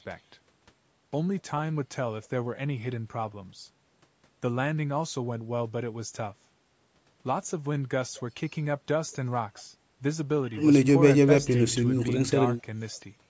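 Nothing stood out on listening to this speech recording, which has passed through ordinary call microphone processing that trims the lowest bass and leaves nothing above 8 kHz.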